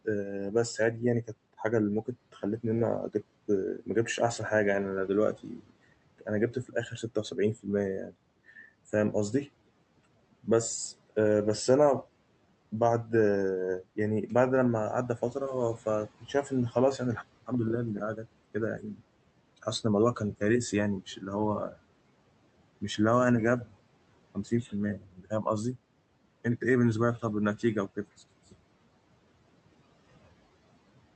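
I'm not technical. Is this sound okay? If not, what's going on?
No. In six places the speech briefly goes faint or seems swallowed, as if word endings and soft sounds were turned down: between 0.05 and 3.15 s, 5.36 and 8.57 s, 16.2 and 17.49 s, 18.16 and 19.0 s, 21.16 and 21.76 s, and 24.35 and 25.46 s. Each lapse lasts well under a second. This is speech cut by the noise suppressor: the filter meant to remove background noise mistook quiet parts of the speech for noise and turned them down too.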